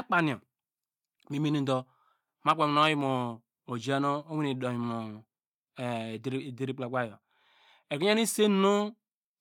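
Speech recording, with no audible technical faults at any point.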